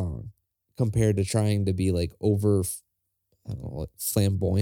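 Nothing in this bit of speech stands out as a technical fault anywhere along its run.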